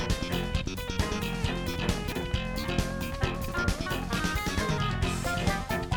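At 2.08 to 2.16 s and again at 3.36 to 3.52 s the audio has chunks out of order. A 40 ms chunk plays late, one chunk behind at the first point and three behind at the second, so the sound jumbles briefly and each reordering leaves three hard joins.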